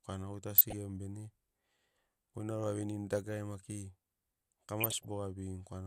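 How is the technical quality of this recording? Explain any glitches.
The recording is marred by two bursts of DAB burbling, at 0.55–0.73 s and 4.81–5.08 s. Weak reception lets bit errors slip past error correction into the MP2 data, corrupting sub-band samples and scale factors, so sub-bands blip with noise and jump in level. A spectrogram shows isolated bands flickering in blocky patches.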